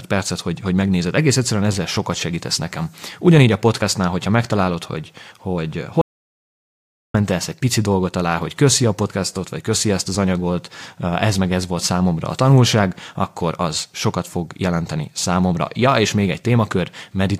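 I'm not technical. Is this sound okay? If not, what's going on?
No, there's an audio dropout to silence from 6.01 to 7.14 s, right after "hogyha megtalálod hogy hogy". The speech stops dead for just over a second, with no background hiss at all, then resumes at "egy pici dolgot alá". Whatever was said in that gap is lost, likely because the input briefly disconnected or muted.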